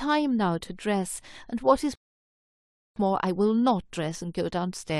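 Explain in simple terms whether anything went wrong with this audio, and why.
Something did go wrong: a rebuffering stall. At 1.95 s the speech drops to silence for about one second, then picks up at 2.96 s exactly where it stopped. The player ran out of downloaded audio and waited for more. Nothing was lost, but the pause was added.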